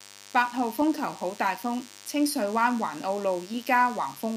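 From start to end, the speech sits over a DECT cordless phone buzz. A nearby handset or base station transmits a short radio burst every 10 ms, and the audio circuitry rectifies those bursts, producing a thin, steady buzz at 100 Hz, roughly 20 dB below the speech. Unlike mains hum, which is smoother and dominated by its low fundamental, this sounds rasping and bright, because the pulse-shaped bursts carry many harmonics stretching high up the spectrum.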